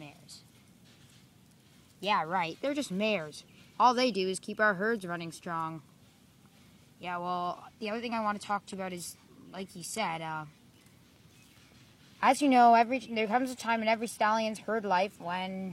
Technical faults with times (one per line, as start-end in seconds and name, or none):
7.67-15.72 adaptive stream at a lower bitrate